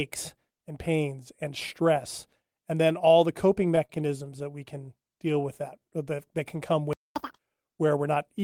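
From 3.63 to 4.52 s you get repeated stalls, a stutter. Packets kept turning up late, so the jitter buffer ran dry seven times. Each gap, the longest about 40 ms, got patched by stretching the last sound, so nothing's lost but it drags and hiccups.

Then between 5.33 and 5.91 s there's a jitter buffer slow-down. The receiver was rebuilding its reserve by repeating tiny slices of the waveform, adding about 61 ms. The speech runs at roughly 91% speed with the pitch unchanged, so it sounds a bit drawn out.

At 6.93 s the audio just cuts out for about 227 ms, a playback stall. The player most likely ran out of data or had its thread blocked, and the output went silent mid-flow until it recovered at 7.16 s.

Right after, from 7.16 to 7.39 s, comes catch-up at higher speed. The player burns through its backlog at double speed by resampling, so pitch jumps around ten semitones and it sounds chipmunky for a moment before snapping back to normal.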